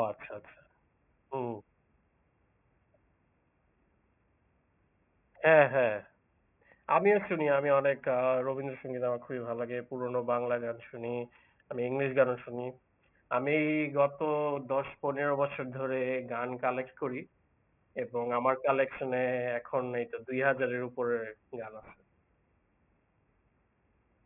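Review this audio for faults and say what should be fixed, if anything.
Aliasing runs throughout the speech. The sound was downsampled without an anti-aliasing filter, which fits a drop from 48 kHz to 6 kHz, so content above 3 kHz folds back to wrong, unrelated pitches, around 20 dB below the signal. Sibilants sound gritty and metallic. A spectrogram shows energy pressed hard against a 3 kHz ceiling, with mirrored streaks moving opposite to the true harmonics. Low-pass below half the target rate before resampling, or use a proper resampler that does this automatically.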